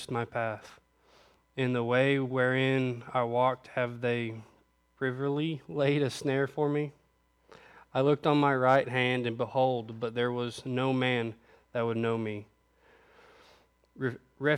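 At 10.04 s there is a single corrupt frame decoded: a few compressed frames arrived with flipped bits and the decoder played them anyway, so misread codes and wrong gains put energy in the wrong part of the spectrum. It is heard as a brief chirp or blip at fairly low level, around -35 dBFS. It has misplaced content rather than the flat snap of a click or the gap of a dropout.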